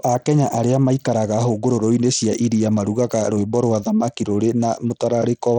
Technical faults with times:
0.00-5.58 Bluetooth SBC compression

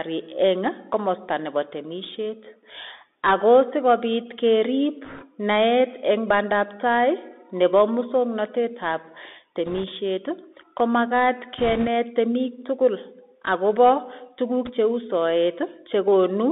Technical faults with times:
0.00-16.52 Bluetooth CVSD headset codec
5.05-5.25 bit errors on a Bluetooth voice link
9.66-9.84 bit errors on a Bluetooth voice link
11.58-11.88 bit errors on a Bluetooth voice link
14.65-14.72 bit errors on a Bluetooth voice link

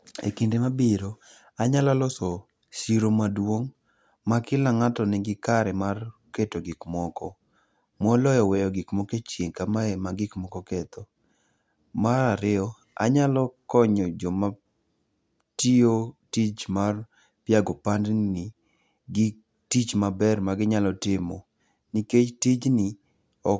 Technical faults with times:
none

